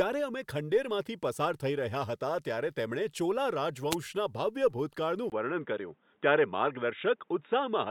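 At 3.90 to 3.95 s a wireless microphone noise hit occurs: the FM radio link fades as reflected paths cancel, and receiver noise surges as a brief swish of static. On a spectrogram it shows as a thin broadband vertical smear; the waveform shows a short hiss burst.

From 5.30 s to the end the sound turns abruptly duller and boxier, after a 20 ms gap, most likely because the input switched to a poorer device. The spectrogram loses everything above 3.8 kHz, a hard ceiling, with a new noise floor roughly 45 dB down, while waveform level stays about the same.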